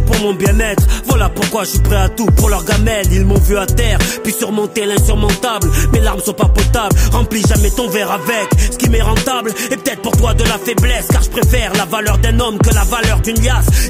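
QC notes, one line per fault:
No faults heard in this recording.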